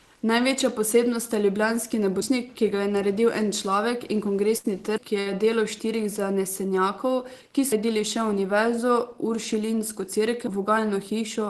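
At 2.22, 4.98, 7.72 and 10.47 s the audio skips forward: audio missing between chunks, likely from a recorder handing off between chunks of 3 s each and dropping a piece at every changeover. Roughly a third of a second vanishes each time, and the two sides butt together with no silence, so the sound jumps abruptly at a steady rhythm.

A burst of packet loss hits at 4.57 to 4.66 s and again at 5.20 to 5.28 s. Each time, packets covering 60 ms of audio never arrived, and the receiver covered the hole by stretching the last sound it had for 66 ms and then 55 ms while lowering its level. This is heard as a brief held, fading smear before the sound resumes a little further on, with the stretch in between gone. Throughout, the call codec's upper limit of 12 kHz removes the frequencies above it.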